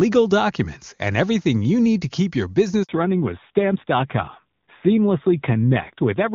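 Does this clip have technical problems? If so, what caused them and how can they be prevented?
Yes. A handover gap cuts the audio right after "keep your", from 2.83 to 2.89 s: about 60 ms with no frames while the call switched networks. The waveform collapses to a flat line and the spectrogram shows a thin blank column. Tuning handover so the new link is set up before the old one is released prevents it.

A fallback to narrowband begins at 2.89 s and lasts to the end. Before it, the wideband HD Voice sound is clear. Afterwards everything above 4 kHz is gone and the sound turns duller and rougher, which points to a narrowband codec at a low rate. On a spectrogram the energy stops at a sharp horizontal ceiling at 4 kHz. Keeping both networks HD Voice-capable avoids it.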